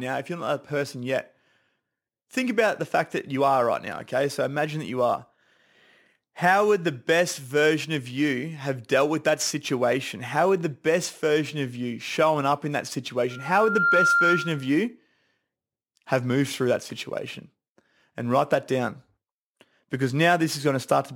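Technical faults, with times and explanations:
13.30–14.76 s, loudspeaker feedback squeal: just after "showing up in that", a microphone is picking up the loudspeaker it drives, and at 1.4 kHz the gain around that loop rises above one. That single frequency reinforces itself on each pass, swelling over roughly half a second into a steady, piercing tone about 5 dB above the speech. It lasts almost a second and a half in all before the squeal stops.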